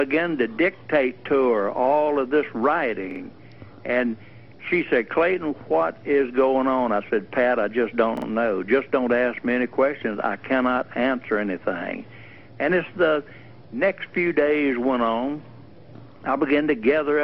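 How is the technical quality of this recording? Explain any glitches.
The recording has two short stutters from a repeated buffer, at about 3.11 to 3.20 s and again at 8.17 to 8.27 s. Each time, new audio arrived late and the playback device replayed its last block, about 46 ms long (which fits a 2048-sample buffer), two extra times, so the same piece sounds three times in a row with a hard join at each repeat. Essentially nothing is lost; the sound just resumes afterwards. On a waveform, the identical segment appears tiled back to back with abrupt steps at the seams. A spectrogram shows the same pattern copied side by side, with thin vertical lines at each join.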